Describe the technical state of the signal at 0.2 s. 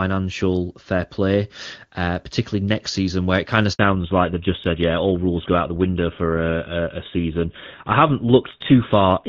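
At 0.2 s the speech is intact, with no audible fault at that moment.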